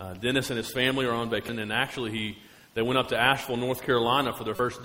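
At 1.49 s there is a very brief blip, and from 4.56 to 4.60 s a longer disruption of about 36 ms. Both are damaged data in a compressed stream: bytes in the encoded file were corrupted, so the decoder misread the affected frames, lost sync and had to search for the next valid frame header. The result is heard as these short disruptions that break into the sound.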